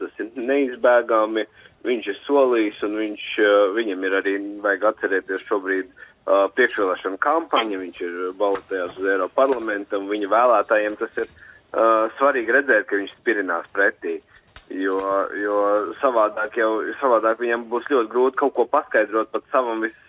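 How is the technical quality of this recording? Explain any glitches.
No glitches can be heard; the signal has the narrow telephone-band character of a call path, with nothing above 4 kHz, which fits G.711 mu-law coding at 64 kbps, and it stays steady and continuous throughout.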